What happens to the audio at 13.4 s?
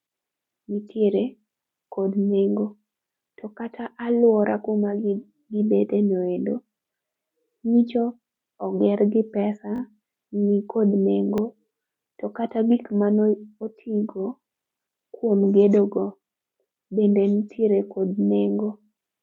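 Nothing goes wrong at 13.4 s: the speech there plays through intact, with no dropout, click, distortion or other fault.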